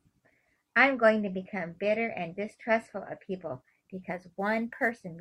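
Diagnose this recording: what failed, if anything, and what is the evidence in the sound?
From 3.54 s to the end, a fine hiss tracks the speech's loudest, brightest moments: converter sample clock jitter, timing wobble of a few microseconds.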